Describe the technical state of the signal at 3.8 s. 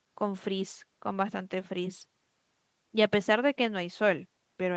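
At 3.8 s the speech is intact, with no fault at that moment, and what can be heard of the call path is its normal band limit, with nothing above about 8 kHz.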